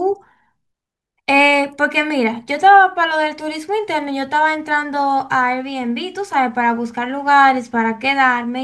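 No technical faults are audible anywhere in the speech recording.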